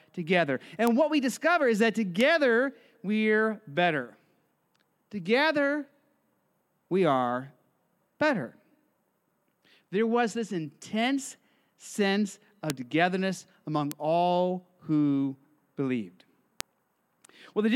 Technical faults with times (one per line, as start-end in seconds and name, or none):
0.87 bit error spike
2.21 bit error spike
12.70 bit error spike
13.91 bit error spike
16.60 bit error spike